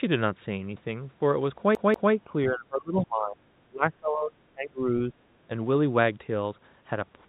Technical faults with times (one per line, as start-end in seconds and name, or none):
1.75-2.13 CD stuck on one turn
2.24-5.13 speech suppressed in double talk